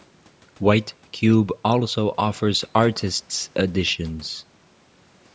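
No technical faults occur in this speech at any point, so there is nothing to place in time order.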